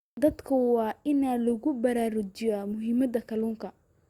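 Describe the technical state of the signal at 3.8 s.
At 3.8 s the speech signal is intact, with no fault present at that moment.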